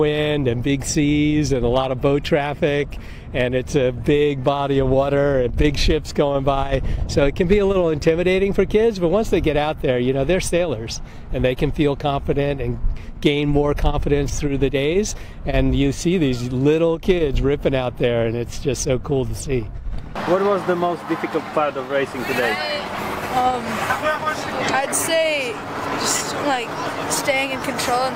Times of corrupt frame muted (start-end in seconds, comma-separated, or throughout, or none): none